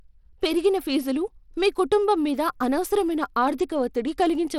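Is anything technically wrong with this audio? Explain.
Yes. Throughout, the speech carries plainly audible coding damage, likely Bluetooth SBC compression at a bitrate around 96 kbps. Coarsely quantised sub-bands give gritty, flickering treble; a spectrogram shows patchy upper bands dropping in and out, with nothing above 19.6 kHz.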